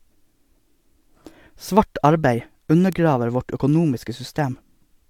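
A bit error spike at 2.93 s: one flipped bit throws a single sample out by a power of two, giving a sharp, broadband tick unrelated to the speech.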